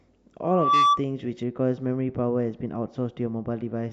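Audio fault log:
0.43–1.02 s, loudspeaker feedback squeal: A single tone at 1.2 kHz grows out of the speech, swelling over roughly a third of a second until it sits around 10 dB above the talker before it stops. The microphone is hearing the loudspeaker it drives, and at that one frequency the loop gain has gone past unity, so each trip around the loop reinforces the tone until something limits it or the loop is broken.
1.43–3.92 s, de-emphasis applied wrongly: From this point to the end the speech turns dull and muffled, with the top end falling away smoothly. The response is down by about 14 dB at 10 kHz relative to 1 kHz. A treble-cut stage meant to undo pre-emphasis has been applied to audio that never had that boost, or applied a second time. The result is a steady downward tilt rather than a sharp filter edge, which is why the sound is blunted instead of abruptly band-limited.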